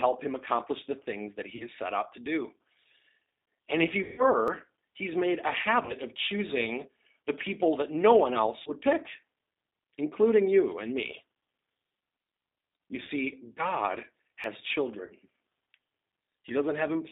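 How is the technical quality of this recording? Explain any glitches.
The recording is plainly degraded, with narrowband codec coloration throughout, six dropouts, and two tiny skips.

G.729 codec: Throughout, the sound is confined to roughly 200 Hz to 3.7 kHz and has a rough, synthetic edge. At 8 kbit/s the voice is rebuilt from a filter, a pitch predictor and sparse pulses. On a spectrogram, nothing appears above about 3.7 kHz.

VoIP packet loss concealed by the speech codec: This happens at 1.56–1.66 s (between "accomplish the things that" and "set out to do"), 4.02–4.23 s, 5.85–5.95 s (after "he's made a", before "of choosing the people"), 8.62–8.72 s (after "people that no one"), 13.03–13.09 s and 15.06–15.13 s. The decoder extends the last pitch and filter into a fading buzzy or noisy sound. The 4.02 s event covers about 160 ms of lost audio, and the rest about 40 ms each. On a spectrogram, the harmonics smear flat and the waveform's envelope sags.

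Audio missing between chunks: At 4.48 s and 14.44 s, a very brief skip joins the sound abruptly. Each gap is likely a short piece dropped where processing chunks meet. On the waveform, a sudden discontinuity appears, with a thin vertical line on the spectrogram.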